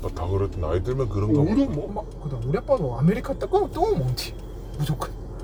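From the start to 1.88 s, a section at the wrong speed plays at 0.796 times its recorded rate. It was likely clocked out at the wrong rate somewhere in editing or playback. The sound drops by roughly four semitones and drags, then snaps back to normal pace and pitch at 1.88 s. Unlike a pure pitch shift, timing stretches along with the lowered pitch, so every event in that opening stretch is slower as well as deeper.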